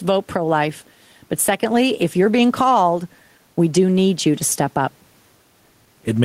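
Gain pumping runs through the whole speech clip, from start to finish. The gain swings by around 5 dB, which makes loud and quiet passages sit unnaturally close together and gives the sound a squashed feel. The likely cause is input gain set far too high, with a fast limiter or compressor clamping down on every loud moment; the room noise sits about 41 dB below the speech.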